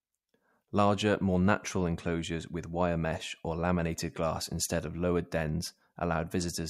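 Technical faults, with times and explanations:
Nothing technical stands out in this speech recording; it comes across as steady and intact the whole way.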